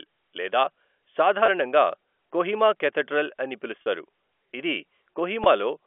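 Packet loss with pitch repetition at 1.46–1.48 s, 3.82–3.85 s and 5.44–5.46 s: gaps of 20, 40 and 20 ms were bridged by repeating the last pitch period, producing brief held, buzzy moments over the narrowband telephone-coded speech.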